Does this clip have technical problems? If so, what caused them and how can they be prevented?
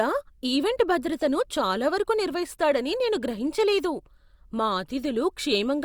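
No, this clip has no technical problems, so there is nothing to prevent.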